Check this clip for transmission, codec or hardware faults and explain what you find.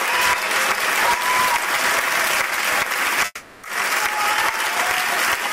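There is one fault, a long network dropout, from 3.25 to 3.65 s. The incoming stream likely stopped delivering audio for roughly 0.4 s, so the receiver had nothing real to play. For about 380 ms it extended the last sound it held as a synthetic buzz or hiss that fades away, followed by about 20 ms of silence. The audio then resumes at 3.65 s, with the original content from that gap simply gone.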